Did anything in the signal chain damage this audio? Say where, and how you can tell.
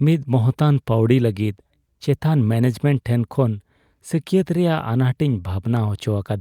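No, nothing audible points to damage at any stage of the chain in this speech recording.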